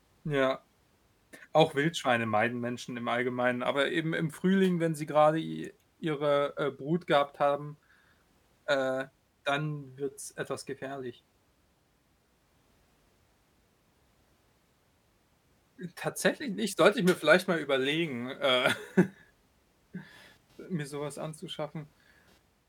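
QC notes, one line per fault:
20.11–22.38 s, computer activity noise: near the end a faint buzzy chirp appears under the speech, pulsing a few hundred times a second and sitting roughly 40 dB below it. The buzz starts and stops on its own schedule rather than following the talking. That fits a processor or graphics load change pulling on the ground the audio circuit shares with the computer, so the machine's activity leaks in as a rhythmic scratch.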